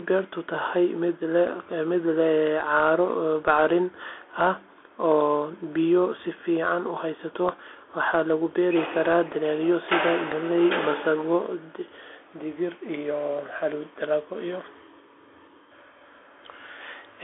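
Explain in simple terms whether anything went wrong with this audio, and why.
The speech passed through a Bluetooth CVSD headset codec for the whole clip. This phone-style link sends only a rising-or-falling signal for each tiny slice of time, adjusting its step size as it goes, and it carries a narrow band of roughly 300 Hz to 3.5 kHz, with nothing above 3.8 kHz. As a result, the speech sounds thin and muffled. The codec's damage is plainly audible: s sounds turn scratchy, loud bright moments distort, and a grainy hiss sits underneath.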